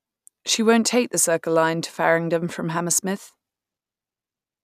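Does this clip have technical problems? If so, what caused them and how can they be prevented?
No, this clip has no technical problems, so there is nothing to prevent.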